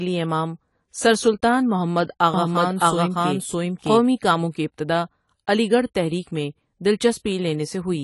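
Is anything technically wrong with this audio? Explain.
Yes, there are two problems. Throughout the speech, the sound is dull and smeared, with a fizzy, warbling edge on sibilants. Nothing is present above 11.5 kHz. This is likely AAC compression at a low bitrate, perhaps around 32 kbps. The encoder lowered its cut-off and discarded fine detail.

From 2.34 to 4.02 s, there is a doubled audio track. A second full-band copy of the speech trails the original by roughly 0.7 s, at about the same level. It is likely a duplicate capture path. The copy cuts in and out abruptly, with no room colour.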